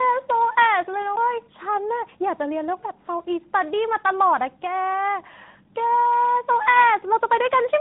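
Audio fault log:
Throughout, tandem speech coding: the speech passes through several codec stages, ending in what sounds like AMR-NB, each re-coding degraded output, so it sounds rough, muffled and warbly, with nothing above 3.8 kHz.
1.16 s, CD skip: a brief mute of a few milliseconds, then the speech jumps to another point as the laser lands on a different turn of the spiral.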